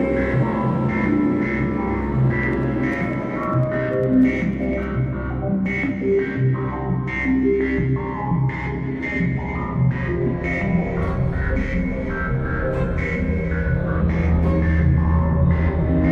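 At 0.41 s, compressed frames are skipped. Roughly 150 ms of audio vanishes, and the sound jumps forward.

From 2.43 s to 4.83 s, periodic USB or driver dropouts produce about thirty ticks spaced 0.1 s apart. Each one cuts out a tiny sliver of audio, and their evenness sets them apart from the single frame jumps.

At 11.55 s and 13.99 s, the frame skipping returns, and each jump now loses around 300 ms.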